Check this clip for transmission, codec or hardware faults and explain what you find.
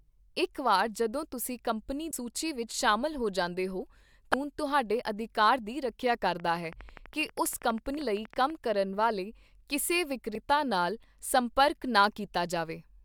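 Three faults are audible in this speech clip: two bursts of corrupted compressed data and one stretch of regular clicking.

Damaged data in the compressed stream occurs at 2.10 to 2.13 s, between "ਤੁਸੀਂ ਕੰਪਨੀ" and "ਸੂਚੀ ਵਿੱਚ ਸ਼ਾਮਲ ਹੋ", and again at 4.34 s, after "ਸ਼ਾਮਲ ਹੋ ਜਾਂਦੇ ਹੋ" and before "ਤੁਹਾਡੇ ਅਧਿਕਾਰ ਦੀ ਰੱਖਿਆ". Corrupted bytes made the decoder misread those frames and lose its place until it found the next valid frame header. The result is a short chirp or blip: the first lasts a few tens of milliseconds, and the second is an instant glitch.

A train of clicks runs from 6.40 to 8.51 s, starting after "ਤੁਹਾਡੇ ਅਧਿਕਾਰ ਦੀ ਰੱਖਿਆ" and ending before "ਕਰਨ ਵਾਲੇ ਕਿਸੇ". Some outside source, likely electrical interference or a faulty connection or power supply, kept injecting near-identical pulses at a steady 12.3 per second, around thirty in all. They are about as loud as the speech itself, so they come through as an even ticking over the sound and through its pauses.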